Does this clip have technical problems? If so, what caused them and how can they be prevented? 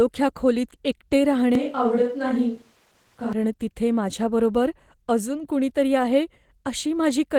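Yes. Opus voice compression runs throughout: the speech sounds plainly hoarse and slightly robotic, which fits hybrid-mode Opus at around 16 kbps. Raising the bitrate to 32 kbps or more would prevent it.

A switch to a distant microphone occurs from 1.55 to 3.33 s, right after "खोलीत एकटे", and returns before "तिथे माझ्याबरोबर अजून कुणीतरी". The voice suddenly turns roomy and hollow at much the same level, with faint room noise. The close mic likely dropped out. Securing the close mic's connection and monitoring it while recording would prevent this.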